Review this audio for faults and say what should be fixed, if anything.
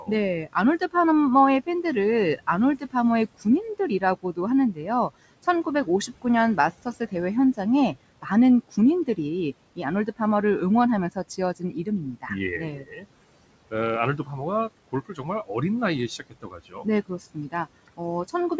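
The noise suppressor mistook parts of the speech for background and turned them down with the room noise, so soft consonants and word endings sound swallowed or faint. This speech cut by the noise suppressor occurs at 0.0–0.95 s, 2.38–4.86 s, 5.43–7.58 s, 8.22–9.18 s, 11.15–13.05 s, 14.92–15.5 s and 16.19–18.51 s, with dips of about 13 to 19 dB. The losses are longest near 11–13 s and 16–18.5 s. Because the room noise sits about 21 dB below the speech, a gentler suppressor setting would avoid this.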